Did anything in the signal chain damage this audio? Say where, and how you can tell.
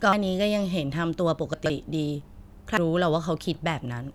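Yes. The codec stage shows damaged data in the compressed stream at two instants, 0.13 s and 2.77 s. Each is a brief chirp or blip that cuts across the speech. When bytes in a compressed frame are lost or corrupted, the decoder cannot read that frame correctly. It outputs garbage or drops the frame, then loses sync and hunts for the next valid frame header. Recovery is quick, so each blip is short.

Between 1.54 s and 1.70 s, a stretch of speech sounds jumbled. These are chunks out of order, pointing to the buffering or network stage. One 40 ms chunk arrived or was written three chunks late. It therefore plays after material that should follow it. No audio is missing, but the sequence is scrambled. There are hard joins where the misplaced chunk meets its neighbours.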